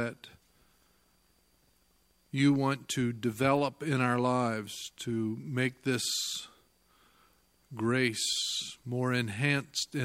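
Right from the start and running the whole way through, there's sample clock jitter: the converter's clock wobbles by something like 0.4 microseconds, so each sample lands a touch early or late. That timing slop turns into error wherever the waveform moves fast, sitting roughly 45 dB under the signal. You hear it as a faint hiss or grit that swells on loud, bright passages and drops away entirely when things go quiet.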